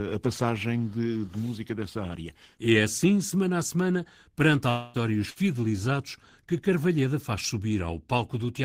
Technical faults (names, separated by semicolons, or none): long network dropout; burst of packet loss